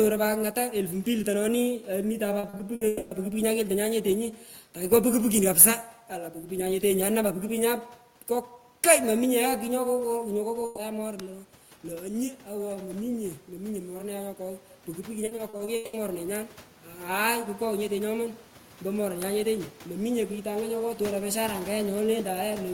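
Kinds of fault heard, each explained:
Repeated packet loss (robotic sound): Short gaps keep recurring, each patched by stretching the last sound. From 2.39 to 2.83 s, four gaps cover about a third of the span. From 15.25 to 15.95 s, seven gaps, the longest 180 ms, make the sound choppy and robotic.
Long network dropout: From 2.87 to 3.13 s the last sound is held and smeared for about a quarter second rather than falling silent. The audio then resumes with that stretch missing. The likely cause is a network dropout.
Automatic gain rising: Around 10.5 s the talker moves away and the input drops by about 11 dB. From 10.43 to 22.43 s the gain control slowly raises its gain by about 12 dB. The voice and room noise swell together.
Burst of packet loss: From 10.65 to 10.79 s, about 120 ms of audio never arrives. The receiver fills the hole by continuing and fading the last sound. The sound then picks up further on, with that piece missing.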